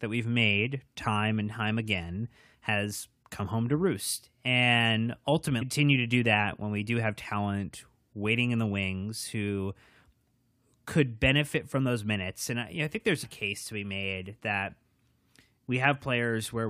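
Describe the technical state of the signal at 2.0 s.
At 2.0 s the signal is intact, with no audible fault at that point in the speech.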